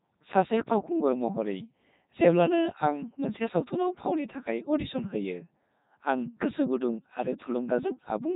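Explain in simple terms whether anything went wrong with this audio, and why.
The speech passes through a Codec 2 vocoder for the whole clip: the voice is rebuilt from tones, so it sounds robotic and buzzy, not merely muffled.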